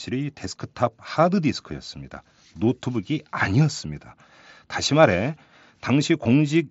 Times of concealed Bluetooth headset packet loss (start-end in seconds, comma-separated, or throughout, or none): 6.24